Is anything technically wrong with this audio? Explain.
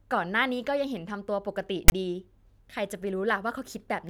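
Yes. File tags played as audio occur from 1.88 to 1.92 s. A block of text tags was decoded as if it were samples, so the character bytes became a loud, one-sided rasp, and its zero padding dropped to silence, a hard-edged burst of static lasting about 37 ms.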